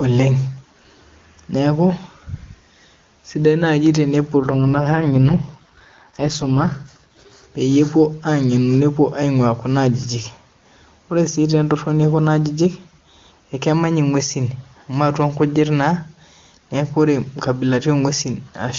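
Right after "sidai naaji", from 4.38 to 7.44 s, the speech turns rough, raspy and synthetic, with no gap and no loss of bandwidth. This is an AMR rate drop: the wideband codec stepped down, which fits a fall from 23.85 to 6.6 kbit/s, before recovering.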